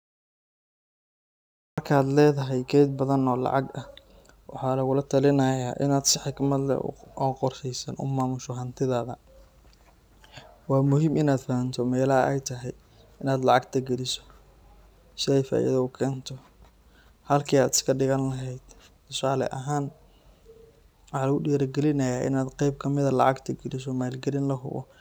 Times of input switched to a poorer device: none

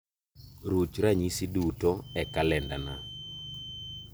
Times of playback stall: none

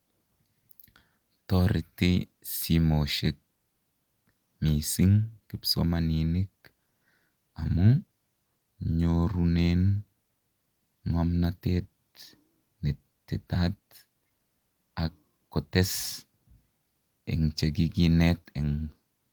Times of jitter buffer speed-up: none

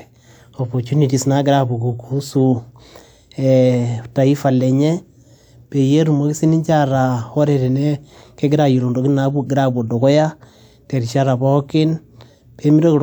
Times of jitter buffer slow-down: none

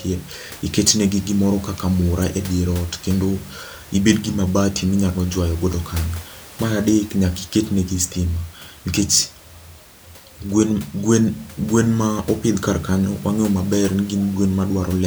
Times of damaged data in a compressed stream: 2.22, 13.88-13.90

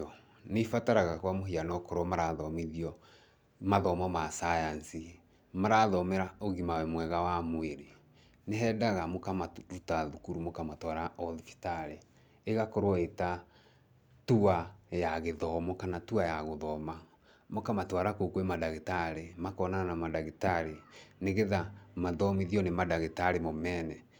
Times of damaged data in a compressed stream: none

